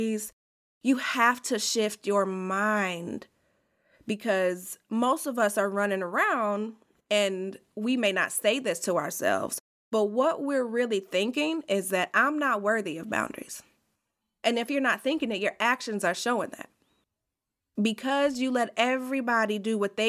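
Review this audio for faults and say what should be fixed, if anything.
Nothing stood out on listening, so there is nothing here that needs fixing.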